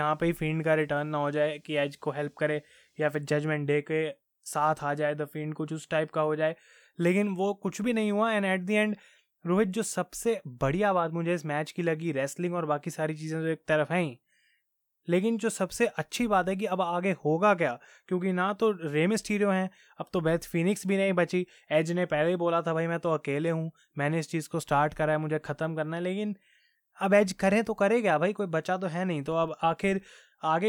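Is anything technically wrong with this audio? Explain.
Yes. From 29.28 to 30.09 s the speech has a filter restarted on every block. The filter loses its state and starts each block from silence. Each restart leaves a small transient. Together they form a 25 Hz buzz, which fits 40 ms blocks, rising and falling with the speech level.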